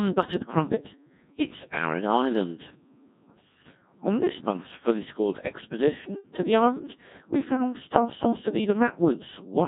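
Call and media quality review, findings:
Codec 2 vocoder, entire speech clip: robotic, buzzy voice with heavy damage, which fits a 1.6 kbit/s mode. Decoder rebuilds speech from sine waves using only pitch, voicing, energy and envelope. Spectrogram shows smooth, evenly spaced synthetic harmonics and missing fine detail. Waveform shape not preserved.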